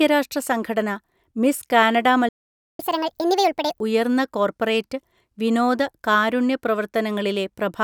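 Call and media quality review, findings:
Playback stall, 2.29–2.79 s: player likely starved of buffered data or blocked. Output silent for about 0.5 s mid-speech, right after "രാഷ്ട്ര സംഘടന മിസ് കാനഡ", then resumes.

Catch-up at higher speed, 2.79–3.80 s: player resamples its backlog at 1.5x to recover lost time. Speech rushed, pitch raised around seven semitones, normal again before "ഉയർന്ന കോർപ്പറേറ്റ് വിനോദ കാരുണ്യ".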